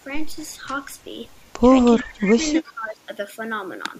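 From 1.99 to 2.04 s there is a brief echo leak: a faint copy of the speech returns 334 ms after the original, around 20 dB down. This is likely a loudspeaker echo that the far end's canceller did not fully remove. Unlike room reverberation, it is a distinct delayed repeat rather than a smooth decaying tail.

The speech is then suppressed in double talk from 2.03 to 2.43 s, dipping by up to about 20 dB, and again from 2.63 to 3.08 s, by up to about 15 dB.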